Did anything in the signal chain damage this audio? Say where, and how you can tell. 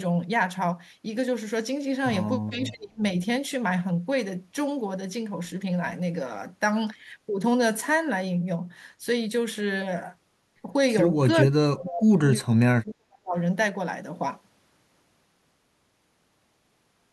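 Yes. Speech suppressed in double talk, at 2.62 to 3.01 s, 11.33 to 12.28 s and 12.53 to 13.36 s, points to the call-processing stage. In each span the speech level falls sharply, by roughly 35 to 40 dB at its deepest, for several hundred milliseconds before recovering. The likely cause is an echo canceller that, with both ends talking at once, mistook this talker for loudspeaker echo and attenuated the signal.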